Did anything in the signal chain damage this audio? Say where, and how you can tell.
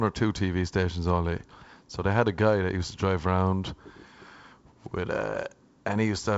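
No, nothing in this speech clip stood out on listening as damage from any stage of the chain, and the wideband telephone coding it passed through sounds as that link normally would.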